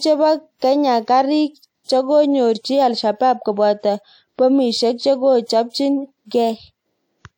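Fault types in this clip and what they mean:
Pre-echo: a transform codec spreads quantisation noise across its whole block, so a sharp attack late in a block drags hiss into the quiet just before it. You can hear that ahead of attacks at 0.59, 1.84 and 5.44 s, lasting 37 to 52 ms.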